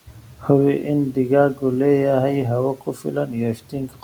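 The noise suppressor cuts speech at 0.07–0.49 s, 2.76–3.35 s and 3.55–4.03 s. It mistakes speech for noise and drops it about 10 to 13 dB. Those parts sound faint and swallowed.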